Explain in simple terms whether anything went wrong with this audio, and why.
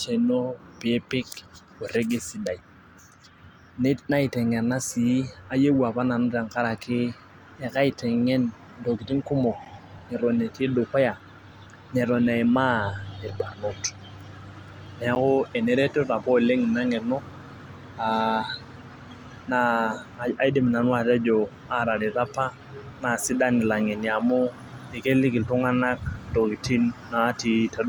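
Yes, something went wrong twice. At 9.65 s and 15.15 s the speech drops out for about 10 ms. Each is a block of digital silence. The sound jumps to zero and back with no fade. You hear a quick tick or pop.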